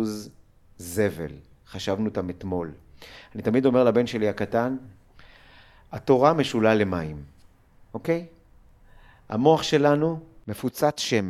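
No dropouts, clicks, distortion or other transport or processing faults can be heard anywhere in the recording.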